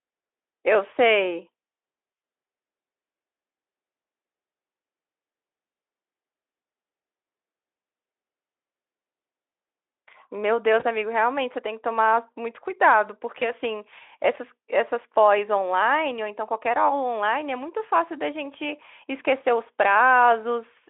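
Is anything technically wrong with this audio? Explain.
Yes, there are two short dropouts in this speech, each covered by VoIP packet loss concealment in the speech codec. They occur at 10.79 to 10.84 s and at 13.40 to 13.51 s. Each gap is about 20 ms of missing audio, which points to a single lost frame. The decoder filled the hole by extrapolating from its last pitch and filter settings while lowering the gain. Because each decoded frame depends on the one before, the damage outlasts the gap, especially in the second event. You hear a brief stretched stretch of sound, a buzzy tone or a coloured noise, that dips in level before the voice recovers. The narrow telephone band of roughly 300 Hz to 3.5 kHz fits a Speex link.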